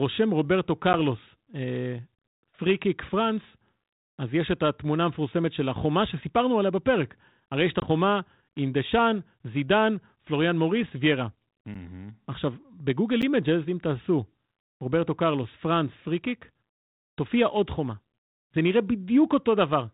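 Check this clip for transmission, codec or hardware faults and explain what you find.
Two kinds of fault are audible in this speech, carried over what sounds like 32 kbit/s G.726 ADPCM with only light coding noise.

Packet loss on an ADPCM call occurs at 0.93 to 0.95 s and 7.80 to 7.91 s, losing about 10 ms and 20 ms of speech, roughly one and then two packets. Each hard-edged silent hole leaves the decoder's adaptive predictor and step size out of step with the sender's, so speech resumes slightly distorted.

A block of digital silence appears at 11.74 s and again at 13.22 s, each about 10.7 ms long. It fits a 512-sample output buffer not being filled in time. The audio cuts out abruptly and back without fading, heard as a brief tick.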